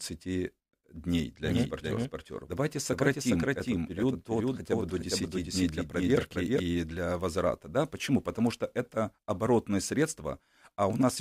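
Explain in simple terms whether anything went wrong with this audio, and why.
From 1.45 to 6.59 s, just before "для возврата", a doubled audio track plays a quieter copy under half a second late. It starts and stops abruptly without fading like an echo, likely from a second recording path.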